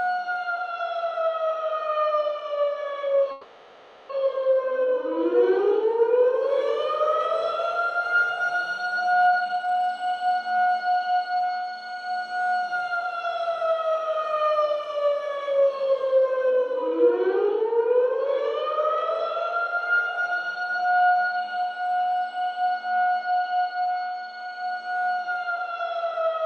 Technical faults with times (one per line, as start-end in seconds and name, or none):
3.31-4.11 call audio freeze
9.27-12.37 jitter buffer speed-up